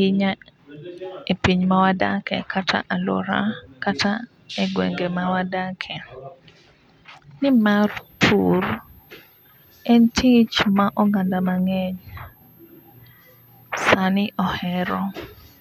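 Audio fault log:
7.49–15.60 s, switching supply whistle: a switching power supply in the recording chain drops into an audible burst mode, its regulation cycling at a rate that lands inside the hearing range. From 7.49 s to the end of the speech, this puts a thin, high whistle about 35 dB below the speech, wandering between 12.2 and 12.5 kHz as the supply's load shifts, so the pitch drifts slightly rather than holding steady.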